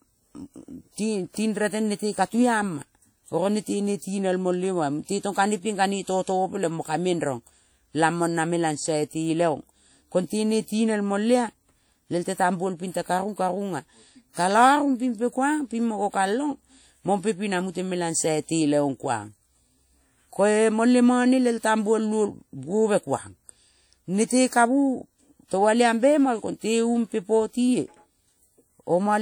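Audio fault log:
throughout: WMA compression. The speech rings and sounds washy, with hiss that breathes along with it. Likely a transform codec at a low bitrate, near 48 kbps.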